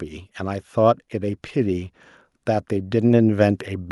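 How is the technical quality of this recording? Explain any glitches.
The recording has one clear fault: automatic gain rising, running from 0.37 s to 3.66 s. The automatic gain control judged the incoming level too low and began turning its gain up, not in one step but as a slow ramp lasting a little over three seconds and adding about 5 dB in total. Because the gain acts on the whole signal, the speech and the background noise swell together, so the room seems to creep closer while the level climbs.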